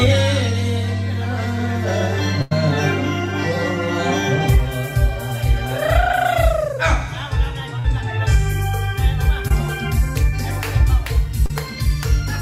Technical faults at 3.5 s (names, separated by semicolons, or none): none